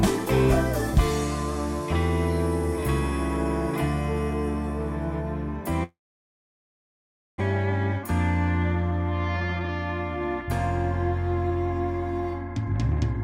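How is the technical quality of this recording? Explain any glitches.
The recording has two clear transmission glitches.

From 5.83 to 7.42 s, a long network dropout is likely. The sound trails off into a brief fading fill, then about 1.4 s of silence, and about 1 s of audio never returns. The length and the silence set it apart from a short packet-loss blip.

From 9.36 to 9.69 s, a jitter buffer speed-up plays the sound at about double speed, trimming roughly 0.3 s of backlog. The pitch stays the same, which distinguishes it from a pitch or sample-rate fault.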